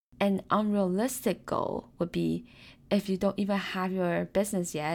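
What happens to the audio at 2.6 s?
Nothing goes wrong at 2.6 s; the speech carries on intact through that moment with no audible fault.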